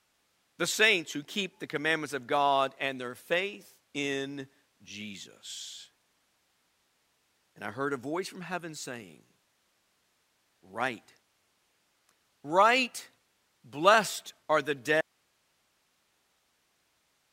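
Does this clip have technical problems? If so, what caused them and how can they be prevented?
Yes: an audio dropout to a faint residue begins at 15.01 s, right after "blessed are the", and lasts to the end. The speech cuts off abruptly, leaving only hiss roughly 45 dB below the signal, likely because the source disconnected while the recording chain stayed live. Securing connections and monitoring the input level during recording would prevent this.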